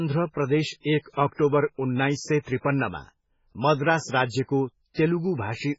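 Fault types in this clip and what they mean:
MP3 compression: The speech was likely squeezed through an MP3 encoder starved of bits, with damage heavy enough to fit a very low bitrate of around 16 kbps. To save data, the encoder removed all treble, leaving nothing above 7.6 kHz, and discarded quieter frequency detail that then flickers in and out between frames. The result is dull, watery, swirling speech throughout, with metallic chirps on s sounds and smeared, soft attacks.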